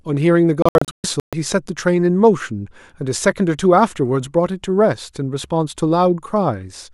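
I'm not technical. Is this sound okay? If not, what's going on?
No. From 0.62 to 1.33 s the speech keeps cutting out in several short silent gaps, the longest about an eighth of a second, before carrying on. This is a digital broadcast dropout: the receiver briefly lost a clean signal and muted, so those moments are gone.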